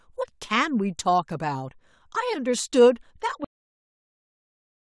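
Speech that stops abruptly at 3.44 s: a cut-off end, where the final buffers were never written, so the sound halts mid-syllable and falls straight to digital silence for the remaining 1.5 s. The waveform shows signal ending in a vertical edge and then a flat line, and the spectrogram shows energy ending in a sharp vertical boundary, with no decay tail.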